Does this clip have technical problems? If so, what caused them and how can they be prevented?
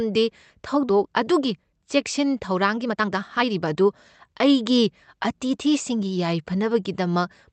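Yes. Between 0.89 and 0.91 s there is a skip ahead. The receiver discarded about a second and a half of speech, probably because the jitter buffer overflowed, and playback jumps straight to later audio with no fill. On a waveform the envelope breaks abruptly at one sample. On a spectrogram the harmonic pattern changes in a single column with no silence or smearing between the two sides. Sizing the jitter buffer so bursts of late packets don't overflow it prevents this.

Jitter buffer speed-up follows in two stretches. From 1.05 to 3.81 s speech runs at about 123% speed, about 0.7 s is removed, and it sounds noticeably hurried at unchanged pitch. From 4.34 to 6.16 s it is a gentler 105%, removing about 0.1 s. The receiver was draining excess buffered delay by cutting pitch-period-sized pieces. A spectrogram shows compressed syllables with harmonics at normal spacing, and the waveform shows tiny splice points every few cycles. 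Smoothing network delay, or letting the buffer shrink more slowly, would avoid the audible rush.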